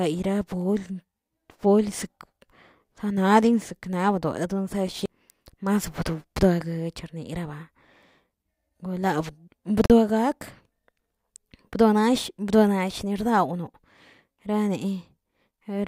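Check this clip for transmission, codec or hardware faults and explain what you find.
One fault is audible: a block of digital silence from 9.86 to 9.90 s. The speech drops out for about 43 ms and then resumes. A run of samples was replaced by zeros, most likely because the output buffer was not filled in time. The length fits a 2048-sample buffer at 48 kHz. The cut has no fade at either edge. You hear a short hole.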